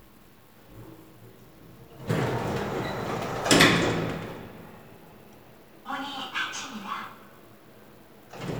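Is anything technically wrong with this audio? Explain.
Yes. At 5.11 s there is a repeated buffer. New audio arrived late, so the device replayed its last 5.8 ms block twice more. That fits a 256-sample buffer. The block is so short that the hard joins sound like a click or brief buzz. About 10 ms of audio is lost.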